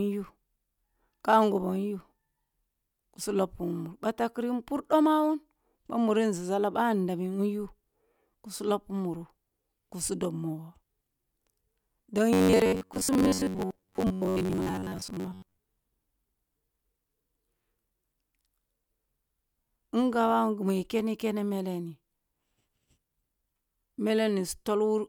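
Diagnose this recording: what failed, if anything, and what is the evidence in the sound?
From 12.33 to 15.57 s the speech becomes a rigid metallic buzz near 93.8 Hz that loosely follows the words: robotic sound from repeated short buffers. Likely a driver or buffer underrun, replaying a chunk of about 10.7 ms for most of that stretch while real audio is skipped.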